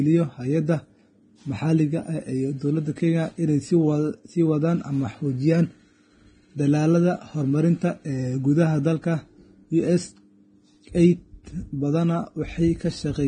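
Speech, and the whole clip carries heavy Vorbis compression artefacts: nothing survives above about 9.7 kHz, and the treble is hissy and grainy, with a roughened, smeared edge on consonants. That's likely low-bitrate Vorbis coding, something around 22 kbps.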